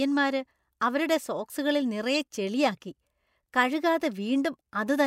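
A speech clip with one fault, a corrupt frame decoded, from 2.15 to 2.21 s. Bit errors in roughly three compressed frames were still decoded, putting a brief burst of wrong-frequency energy around the speech.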